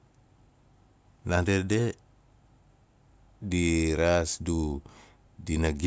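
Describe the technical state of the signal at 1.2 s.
At 1.2 s the speech signal is intact, with no audible fault at that point.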